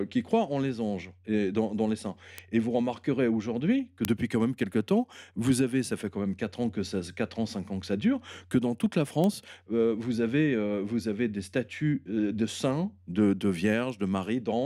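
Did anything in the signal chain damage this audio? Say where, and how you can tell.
Yes: bit error spikes at 2.38 s after "et dans les saints", 4.05 s after "vous remarquerez aujourd'hui que", and 9.24 s after "que dans toute la". Each is a flipped bit in a digital link or in storage, one sample jumping to about -12 dBFS, or about 12 dB higher at 4.05 s. The waveform shows a lone needle, and the spectrogram a thin full-band vertical line.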